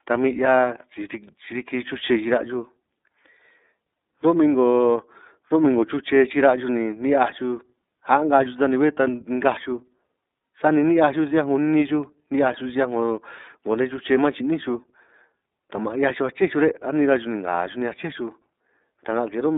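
Throughout the speech, the signal has passed through the iLBC codec, which codes each 30 ms frame on its own at a rate fitting its 13.33 kbps mode. Nothing above 3.8 kHz survives, the band runs from 250 Hz to 3.7 kHz, and the speech sounds plainly rough and synthetic.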